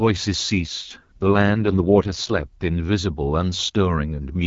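From 0.56 to 2.43 s the speech turns rough, raspy and synthetic, with no gap or loss of bandwidth, then clears again. This is an AMR rate drop: the sound points to the AMR-WB codec stepping down from about 12.65 kbit/s to its 6.6 kbit/s mode.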